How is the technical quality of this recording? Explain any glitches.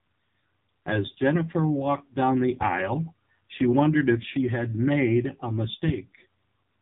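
Technical quality is poor: the speech has passed through a heavily compressed mobile codec, and a loud pop cuts in near the end.

Throughout, the AMR narrowband mobile codec is at work. The audio was squeezed into a low-rate mobile speech codec, most likely the 5.9 kbps AMR-NB mode, which rebuilds the voice from a vocal-tract model fed by a few pulses each frame. Nothing above 3.8 kHz survives, so the speech sounds thin and boxed in, with a buzzy, synthetic edge from the heavy coding damage.

From 5.88 to 5.92 s there is a single loud pop, roughly 15 dB above the speech. A sudden voltage step or spike, likely from a plug, switch or static discharge, was added to the signal, and the circuitry after it shaped it into a brief pulse. It is heard as one sharp crack laid over the speech, which carries on underneath without a break.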